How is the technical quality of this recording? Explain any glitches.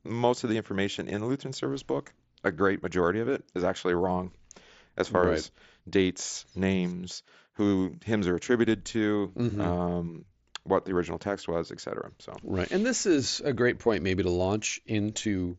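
The recording comes through a Bluetooth mSBC headset link, with speech bandlimited to 8 kHz and a light graininess on louder sounds, and it has two short glitches.

At 1.17 s, just after "most of the information", there is a barely noticeable hiccup. This is concealed Bluetooth headset packet loss: one 7.5 ms packet was lost and patched with a repeat of the preceding waveform.

From 4.36 to 5.41 s, between "it is actually wrong" and "dates names who hymns", seven regular ticks of uneven strength occur. These are CD scratch ticks: a blemish passes under the laser once per revolution, and the player interpolates the unrecoverable samples, leaving brief clicks.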